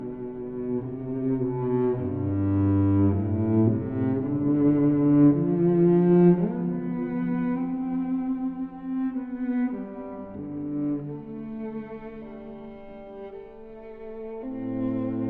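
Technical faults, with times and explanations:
No technical faults are present in this recording.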